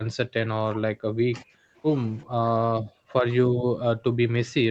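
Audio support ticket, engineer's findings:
Speech suppressed in double talk, 0.00–1.77 s, 2.25–2.49 s, 2.71–3.21 s: speech ducked deeply, roughly 40 dB, likely echo canceller misreading overlap as echo. Gated dips, not codec dropouts or clipping.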